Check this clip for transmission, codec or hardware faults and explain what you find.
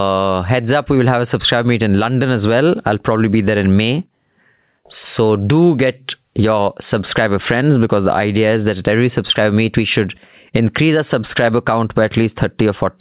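There is one fault, and it runs through the whole clip.

Gain pumping is present throughout the speech, from start to finish. The likely cause is input gain set far too high for the microphone, with a fast limiter or compressor hauling it back down whenever the talker gets loud. The level swings by around 15 dB, so quiet and loud passages sit unnaturally close together and the speech sounds squashed. The narrowband call path, with nothing above 4 kHz, is consistent with a G.711 line.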